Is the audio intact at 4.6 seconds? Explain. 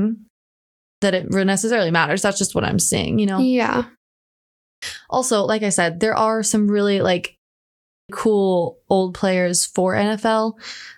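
No. A clipped start after a pause runs from 4.36 to 4.82 s: the output device, idle through a 0.48 s gap, wakes late, swallowing about 460 ms before "also like I said".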